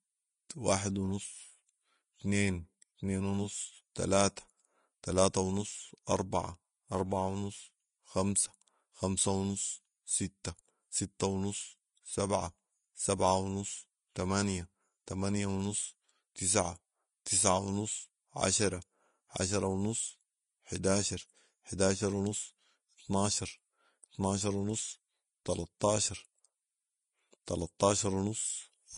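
Throughout, the speech sounds hissy and grainy with blurred attacks, likely from Vorbis compression near 31 kbps; a spectrogram shows a hard ceiling at 10.5 kHz.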